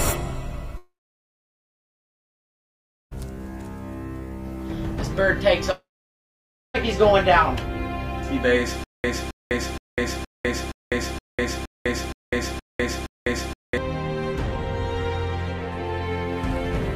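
From 0.77 to 3.13 s, a long network dropout likely stopped audio arriving, and about 2.34 s of sound never played. The receiver carried the last sound forward as a brief fading tail, then left roughly 2.2 s of silence before the audio resumed past the lost stretch. The same thing happens from 5.71 to 6.76 s. About 1.04 s goes missing, and after the short fade the gap sits near-silent for about 0.92 s.

From 8.84 to 13.78 s, a stutter with silent gaps follows what is likely a stalled player retrying over and over. Each retry replays the same 268 ms fragment, then runs dry for about 202 ms of digital silence. That gives an even 469 ms rhythm, ten times over. Everything that should have played during those five seconds is lost, replaced by the repeating burst.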